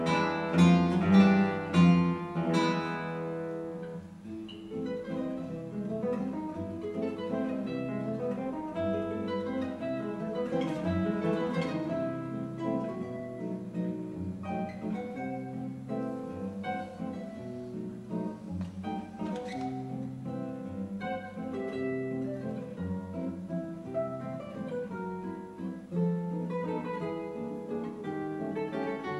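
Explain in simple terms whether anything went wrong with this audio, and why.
Two sharp, tiny clicks sound at 22.37 s and 25.28 s, likely dropped samples: a few missing moments of audio make the signal jump abruptly.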